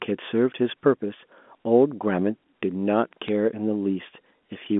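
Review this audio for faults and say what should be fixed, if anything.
Bit errors on a digital phone line at 1.11 s and 3.28 s: flipped bits at a very low error rate corrupt single A-law samples into brief sharp ticks. Repairing the noisy transmission link, or carrying the audio over a path with error detection, would prevent them.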